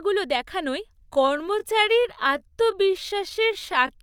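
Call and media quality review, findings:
Time-stretched section, 1.03 s to end: speech slows to 0.69x, pitch unchanged, drags. Likely time-scale software repeating segments; spectrogram shows elongated harmonics.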